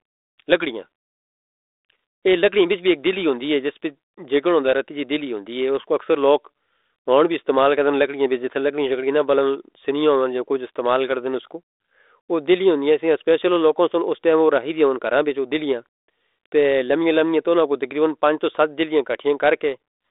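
Speech, telephone-band, with no technical faults heard.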